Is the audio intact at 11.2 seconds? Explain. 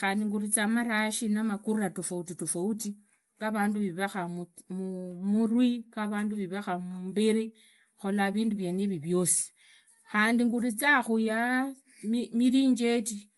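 No. At 11.2 s the speech carries the plainly audible grainy, breathy edge of Bluetooth LC3 compression, present across the whole clip. This is likely that transform codec at a rate that fits about 48 kbps in 10 ms frames, discarding upper-spectrum detail and filling it with noise.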